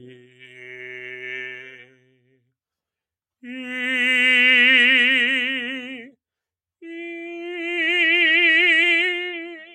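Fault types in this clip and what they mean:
Noise suppressor applied to music or sounds: A noise suppressor built for speech stays active across the whole music clip. It treats sustained tones, ambience and reverb as noise and pulls them down. The gain keeps moving by something like 15 dB. Attacks pass through, but the held parts and tails sink behind them. The result is a pumping, fluttering level that leaves the music thinner and less continuous than it should be.
Sound cut by the noise suppressor: In two stretches the suppressor mistakes the music itself for noise and cuts it harder than elsewhere. The first runs from 0.1 to 1.24 s, with the level dropping by about 18 dB at its deepest. The second runs from 1.5 to 2.5 s, dipping by about 19 dB. Each lasts roughly a second. Sustained and decaying sound sinks sharply there, and tails are clipped short.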